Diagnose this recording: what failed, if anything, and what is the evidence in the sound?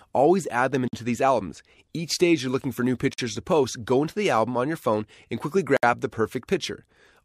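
The failure is at the codec stage, where separately encoded pieces were joined. Three gaps at a join of encoded pieces cut into continuous speech: 0.88 to 0.93 s (52 ms), 3.14 to 3.18 s (48 ms), and 5.77 to 5.83 s (64 ms). Each is a short silence with smeared edges. The speech then resumes where it stopped. The pieces were not trimmed, so each run's leading encoder delay and final frame padding remain as dead air.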